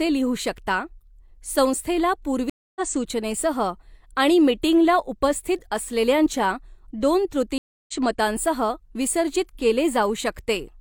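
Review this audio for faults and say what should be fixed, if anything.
The connection dropped twice and the player reconnected with a fresh decoder: a stream reconnect at 2.50–2.81 s (263 ms silence) and at 7.58–7.93 s (304 ms silence). Each time the speech resumes about 200 ms and 300 ms further along, so material is skipped. A larger client buffer with automatic resume from the last received position would prevent it.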